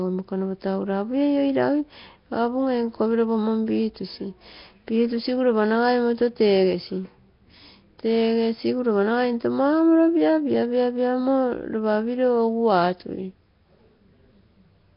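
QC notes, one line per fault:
Throughout: Nellymoser compression. The speech has a rough, hissy halo and a smeared, underwater quality, and nothing is heard above 5.3 kHz. The damage is heavy. The likely cause is the old Flash microphone codec, which codes short blocks with very few bits per sample. Weak bands get no bits at all and are refilled with noise, hence the hiss and smearing. The dullness points to a low bitrate, about 22 kbps.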